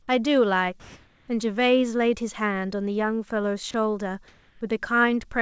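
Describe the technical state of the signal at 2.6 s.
At 2.6 s the speech is intact, with no dropout, glitch or distortion, only the steady band limit of the G.722 call path, which leaves nothing above 8 kHz.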